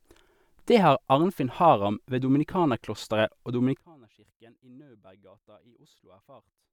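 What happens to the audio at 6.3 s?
At 6.3 s the speech sits in a span from 3.79 s to the end where it falls about 27 dB to a faint residue. The likely cause is one channel inverted, cancelling the shared centre when summed to mono. Unlike a dropout, a faint trace remains rather than silence.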